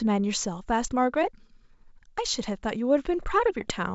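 At 3.61 s the speech hits bit errors on an ADPCM link, lasting until 3.71 s. A few bits flipped, around 0.3 percent. Each one knocks the decoder's step size and predictor off track. The result is pops and a rough, jumpy burst over the wideband G.722 sound.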